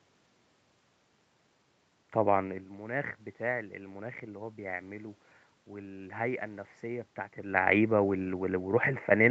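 No technical faults are audible in the speech. The sound stops at 8 kHz, as expected from the Opus call path, and the level changes around 2.5 s and 7.5 s come from the talker moving relative to the microphone.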